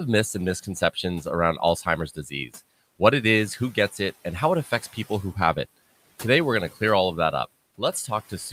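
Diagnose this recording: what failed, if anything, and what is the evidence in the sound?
The failure is in call processing: speech cut by the noise suppressor. Right after "myths and", between 0.63 and 1.04 s, pieces of the speech get swallowed, dipping by about 13 dB. It happens again from 2.07 to 2.55 s, just before "what it is who", with a drop of about 11 dB. Each time only around a tenth of a second is actually hit. The suppressor mistook those soft bits for the room noise sitting about 23 dB under the speech and pulled them down with it.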